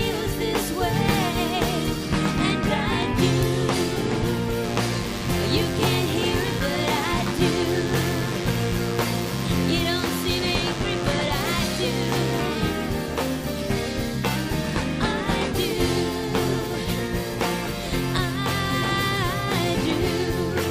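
At 4.64 s a thin, steady buzz comes in and sits under the sound until 12.42 s. That's classic DECT cordless phone buzz: a handset or base station close by fires a short radio burst every 10 ms, something in the audio chain rectifies it, and you get a 100 Hz tone packed with harmonics. Here it's roughly 15 dB below the signal, with that raspy, edgy character.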